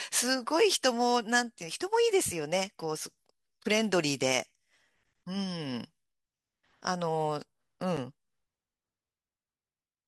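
Gap between stream segments at 7.97 s: the segment timestamps leave a 9 ms gap, which the player fills with silence. It sounds like a hard-edged dropout, with no audio lost.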